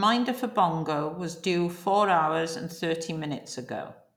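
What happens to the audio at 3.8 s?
Nothing goes wrong at 3.8 s; the speech there plays through intact, with no dropout, click or other fault.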